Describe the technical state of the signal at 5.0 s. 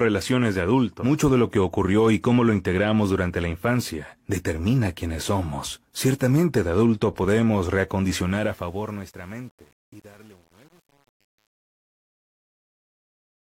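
At 5.0 s the speech signal is intact, with no audible fault at that moment.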